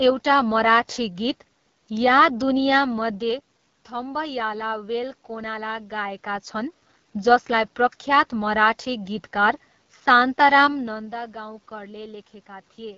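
Throughout, the speech carries AMR wideband (HD Voice) codec damage: a rough, raspy, buzzy texture consistent with a low rate near 8.85 kbit/s, where the pulse-driven vocal tract model is starved of bits. A spectrogram shows nothing above 7.5 kHz and a smeared, noise-like top band.

From 10.64 to 11.16 s, zipper noise appears as the level drops by roughly 15 dB in unsmoothed 2 dB steps, around twenty per second. Each jump clicks, giving a fast ticking. The waveform envelope descends as a visible staircase, and the spectrogram shows faint vertical lines at each step.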